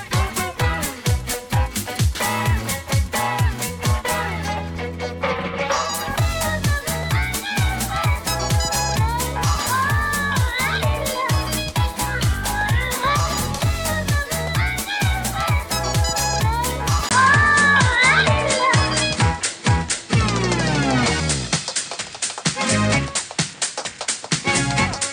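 An input switched to a poorer device, from 17.09 s to the end: after a 20 ms gap the sound turns duller and narrower, with nothing above 9.5 kHz, its level shifts by about 5 dB, and a new background noise sits roughly 30 dB below it. The likely cause is the system changing its capture source mid-recording to a lower-grade microphone or a headset's call profile, which passes a narrower band and brings its own tone and noise.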